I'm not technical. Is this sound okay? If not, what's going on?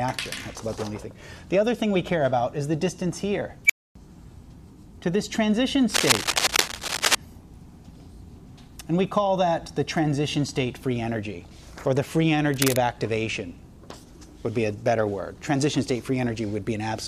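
No. At 3.66 s there's an unstable filter: a processing stage runs away, a high beep swells within a split second, then the audio drops out for about a quarter second. From 5.9 to 7.1 s and again from 12.54 to 12.78 s, scratchy rustling sits over the sound, likely cable scratch noise from a worn lead or connector being moved.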